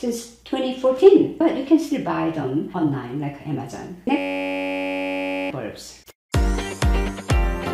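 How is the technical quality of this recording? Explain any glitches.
The recording has one clear fault: a system hang loop from 4.18 s to 5.50 s. During that stretch the playback or capture side stalled while the audio hardware kept replaying the same block, cycling a 10.67 ms fragment over a hundred times. That length fits a 512-sample buffer. Because the loop is so short, it comes across as a steady buzz at 93.8 Hz rather than a stutter, and about a second and a half of the real audio is missing.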